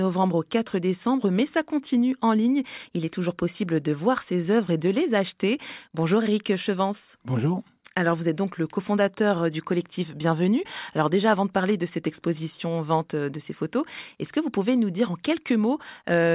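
Listening to this speech recording, nothing stood out.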